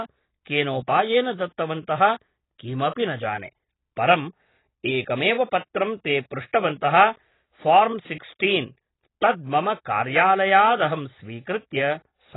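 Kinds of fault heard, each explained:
AAC compression: The speech is cut off hard above about 3.9 kHz, so it sounds dull and boxy, with a smeared, watery texture that gets worse on sustained sounds and sibilants. That points to heavy damage, likely from AAC-LC squeezed down to something like 16 kbps. At that rate the encoder throws away the top of the spectrum and quantises what's left so coarsely that the detail smears across each frame.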